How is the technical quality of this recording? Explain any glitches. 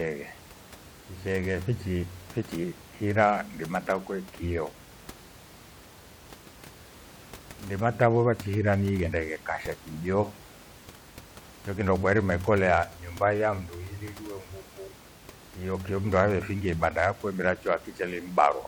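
No glitches are audible here.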